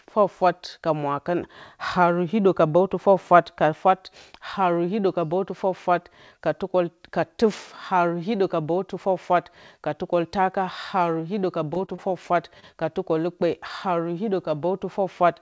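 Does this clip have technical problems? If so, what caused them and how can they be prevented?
Yes. Short concealed packet loss occurs at 11.74, 11.86, 11.96 and 12.60 s, each lasting about 40 ms. Around 20 ms of audio arrived too late each time, and the receiver covered the gap by extending the preceding sound before crossfading back, which produces brief smears or wobbles in the speech. The call band itself stops at 8 kHz. Prevention: use a stable or wired connection and a deeper jitter buffer so late packets still arrive in time.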